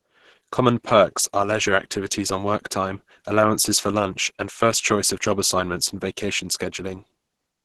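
From start to finish the speech sounds muffled, hoarse and grainy, with a rough, noisy texture where cleaner tones would be and nothing at all above about 12.1 kHz. This is likely Opus compression at a very low bitrate, around 12 kbps. At that rate the encoder drops into its hybrid speech mode, coding the lower band as speech and filling the upper bands coarsely. That caps the bandwidth and leaves the heavy hoarse, noisy damage heard throughout.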